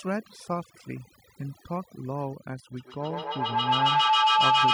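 From the start, overdone noise removal is at work. A noise reduction stage set far too hard pulls bands near its noise estimate right down, so the background drops and breaks up into twinkling specks. A spectrogram shows scattered isolated dots between phrases and ragged, gappy harmonics.

From 2.76 s to the end, a feedback howl builds as a microphone-to-loudspeaker loop gains level each trip. A tone around 1 kHz swells, with the loop repeating roughly every 150 ms, and peaks about 10 dB above the speech. It appears as a bright horizontal line with a rising waveform envelope.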